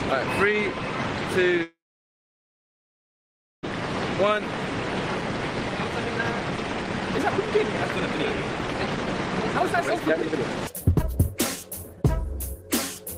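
At 1.63 s the sound halts for about 2.0 s, a brief fading buzz then near silence, a call audio freeze likely from delayed packets; it resumes at 3.65 s without losing anything, unlike a dropout. From 5.88 s to 13.16 s a jitter buffer speed-up runs the sound at 127% speed with unchanged pitch, trimming roughly two seconds of backlog.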